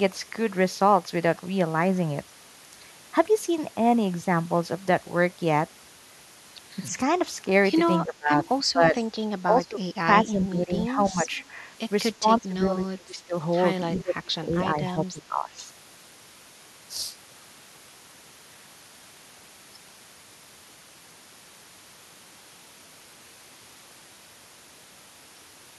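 Speech suppressed in double talk appears at 8.05–8.96 s, 9.44–9.81 s, 10.25–11.31 s, 12.2–13.35 s and 13.92–15.56 s in this speech recording. The voice sinks by roughly 10 to 25 dB in patches, most deeply in the last stretch. This is likely an echo canceller mistaking overlapping talk for its own loudspeaker echo and damping both. Echo leak surfaces at 11.32 s and at 13.95–14.02 s as a faint copy of the voice, delayed by 322 ms and sitting roughly 25 to 35 dB below the speech. Residual echo from a loudspeaker path that the canceller failed to remove fully is the likely source.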